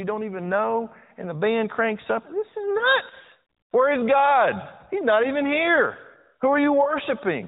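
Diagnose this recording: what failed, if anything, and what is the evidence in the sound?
Lost AMR speech frames at 0.44–0.47 s, 2.78–2.87 s and 6.84–6.90 s, each a single 20 ms frame, are a radio-link fault. The decoder discarded corrupted frames and repeated the last good pitch and vocal-tract settings at lower gain, causing brief dips or warbles in the band-limited, sub-4 kHz narrowband speech.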